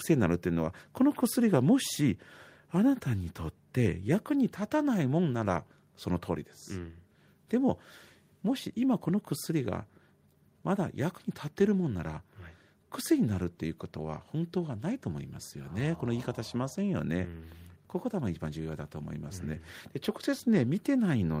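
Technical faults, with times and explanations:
Nothing stood out as a technical fault on listening to this speech recording.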